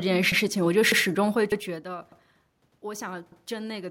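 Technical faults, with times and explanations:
0.32–0.42 s, 0.92–1.02 s, 1.52–1.62 s, 2.12–2.22 s, 2.72–2.82 s and 3.32–3.42 s: overlapping chunks. The audio is handled in 0.5 s chunks, and each new chunk begins 100 ms before the previous one finished, so that 100 ms plays twice at every join. The result is a regular stutter with a click roughly every 0.6 s. On a waveform, a short stretch of identical shape repeats at each join, often with a step in level. A spectrogram shows thin vertical seams where the same patterns are duplicated side by side.
1.83 s to the end: automatic gain rising. The input level fell by about 17 dB, and the gain control responded by turning up its gain gradually over the last two seconds. Because the gain applies to everything, the speech and the room noise swell together. This sets it apart from the ordinary drop in level when the talker moves around 1.5 s. On a waveform, the envelope widens steadily. 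On a spectrogram, the noise floor brightens along with the speech.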